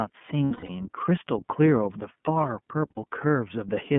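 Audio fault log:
Throughout: iLBC codec. The speech is squeezed into a narrowband phone line, roughly 150 Hz to 3.4 kHz, so there's nothing airy up top and the low end is thin too. At what sounds like around 13 kbps with 30 ms frames, the coding damage is plainly audible, a rough, slightly synthetic edge on the voice, because each frame's excitation is rebuilt on its own from a coarse model rather than carried over from the one before.
0.45–0.70 s and 2.91–2.98 s: lost iLBC frames. Packets went missing and the decoder papered over them by looping the last pitch cycle with some noise mixed in. The first stretch covers 180 ms of lost audio scattered across about a quarter second, the longest unbroken run around a tenth of a second, and it comes out as a held, buzzy vowel that sags a little. The second is a quick 60 ms blip. Since iLBC frames stand alone, the voice snaps back right after each.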